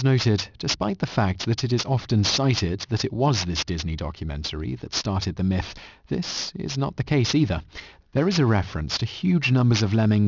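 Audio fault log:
Throughout, aliasing: the speech has been reduced to a lower sample rate without an anti-alias filter, and the band edge at 6 kHz fits a conversion from 44.1 kHz down to 12 kHz. Sibilant energy that sat above 6 kHz was not removed but reflected back below it, landing at unrelated frequencies. Those folded components sit only roughly 10 dB under the speech, so the s and sh sounds come out gritty and metallic, with energy packed hard against 6 kHz.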